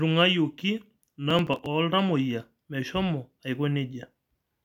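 A speech clip with a burst of gritty, tearing crackle from 1.12 to 1.66 s, riding on the sound and stopping once it clears. This is processor overload crackle: with the processor too busy, around fifteen short buffers, each roughly 5 ms, missed their deadlines and were skipped, leaving tiny hard-edged gaps.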